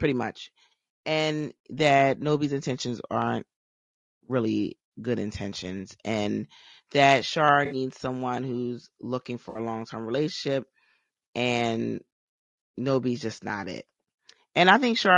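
Throughout, the speech sounds rough and grainy, with noise between the harmonics and a synthetic-sounding top band. This is likely low-delay AAC compression, at a rate that fits about 32 kbps. Plain band-limiting would dull the top band rather than make it sound artificial. At 7.65 s, just before "someone who's looking", and again at 9.49 s, between "someone who's looking" and "a long term relationship", AAC frame loss with concealment leaves brief smeared, phasey patches of roughly 60 ms each, which fits a few lost frames. They are filled in rather than cut, unlike silent dropouts or clicks.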